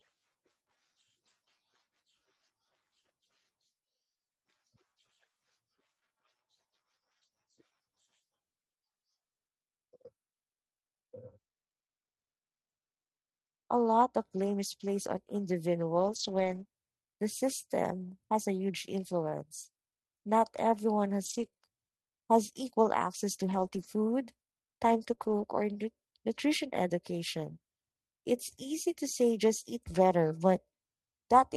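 Speech that's come through a call path, and between 14.37 and 25.45 s, starting right after "lot of", there are scattered short gaps. Around seven small packet losses land one at a time, each only a few tens of milliseconds at most, and the receiver papers over each by stretching the preceding sound. You hear it as brief ticks and little smeary hiccups rather than dropouts. The top end rolls off near 12 kHz, which fits an Opus call codec.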